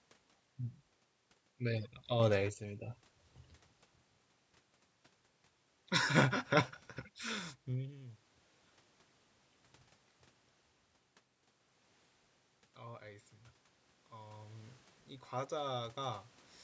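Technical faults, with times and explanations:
2.20–2.54 s, sudden gain jump: the level leaps by about 6 dB from one sample to the next, and the room noise jumps with the voice. That points to a gain change likely applied without a ramp. Unlike automatic gain, there is no gradual swell.
14.11–16.28 s, automatic gain rising: over roughly two seconds the level creeps up by about 5 dB as the gain control compensates for quiet input. Voice and background swell together, unlike the shift around 7.5 s, where only the talker's distance changes.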